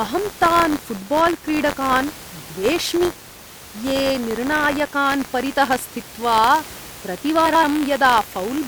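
Right from the start there's buffer tearing running under the whole clip, a steady robotic rattle at about 93.8 Hz, which fits a 512-sample buffer. The writer and the playback hardware have drifted so they cross inside every period, and a small slice of each buffer ends up holding audio from a few tens of milliseconds earlier, with hard joins either side. The rattle rides along with the speech, on top of faint room noise sitting about 20 dB down.

Then from 7.46 to 7.64 s there's a stretch of frames out of order. Two neighbouring blocks of 85.3 ms each got swapped and decoded in that order, which points to runs of about four frames apiece. The passage comes out as a garbled flutter with its halves exchanged. Nothing's actually missing; it's all there, just in the wrong order.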